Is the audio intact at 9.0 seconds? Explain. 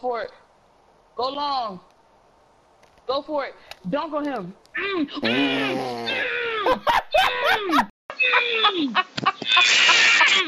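No. At 9.0 seconds the input has likely switched to a poorer device, from 7.90 s to the end at 10.47 s. The new path carries nothing above 7.6 kHz, so the sound turns dull and boxy, arriving after a 200 ms silence with a modest level shift and fresh background noise.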